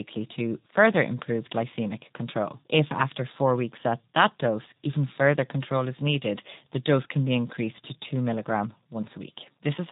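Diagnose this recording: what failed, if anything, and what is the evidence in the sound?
The speech has passed through the G.723.1 codec at the codec stage, with heavy damage throughout. Nothing above 4 kHz survives, so the sound is muffled, and the slowly updated 30 ms voice model leaves it hoarse and blurs consonants, which fits a bitrate of about 6 kbit/s.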